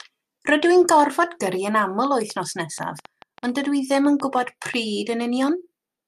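Interference from nearby equipment or a faulty connection or power supply likely injects a train of clicks from 1.54 to 4.75 s: around twenty similar pulses at an uneven 5.6 per second, peaking about 5 dB above the speech, heard as irregular ticking that continues through pauses.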